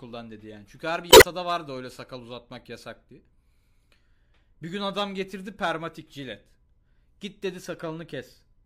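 At 1.09 s, just after "her bir", damaged data in a compressed stream causes a glitch lasting about 0.15 s before "vardı öyle sakal uzatmak". Corrupted frames are misread while the decoder regains sync; spectrograms show a broadband smear, waveforms an abrupt discontinuity.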